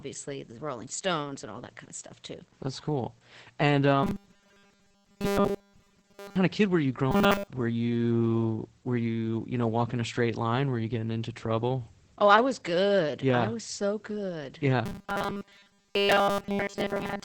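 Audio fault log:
Throughout: Opus voice compression at 12 kbps in SILK wideband mode leaves nothing above about 8 kHz and coarse excitation, so speech sounds muffled and hoarse.
4.03–6.36 s, 7.11–7.48 s, 14.86–17.25 s: robotic sound from repeated short buffers, a rigid 200 Hz metallic buzz on either side of "of kid were you", likely from 5 ms buffers replaying and displacing the real audio.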